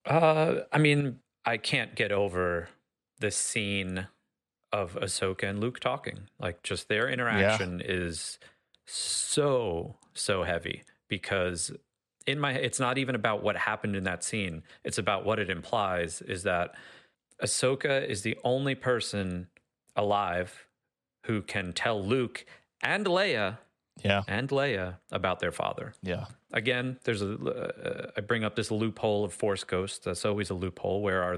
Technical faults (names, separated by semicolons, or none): one channel drops out